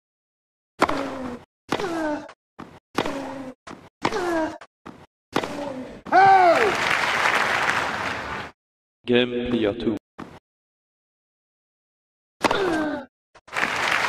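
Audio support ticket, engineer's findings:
Drift correction step, 3.35–4.87 s: likely clock-matching resampler jumping playback rate about 6% faster in one step to drain buffer. Sound runs fast and sits about a semitone sharp (101 cents) for 1.5 s, then snaps back.

Drift correction step, 8.24–9.05 s: likely the same component stepping the rate about 6% slower to refill. Sound drags and drops about a semitone flat (108 cents) for 0.8 s before abruptly returning to pitch.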